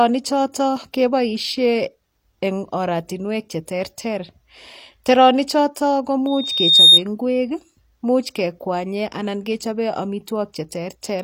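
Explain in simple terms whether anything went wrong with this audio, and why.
A piercing whistle near 3.7 kHz swells up over about half a second at 6.27 s and stops at 7.02 s, louder than the speech. This is loudspeaker feedback squeal: the microphone picked up its own loudspeaker, and the sound kept looping and growing.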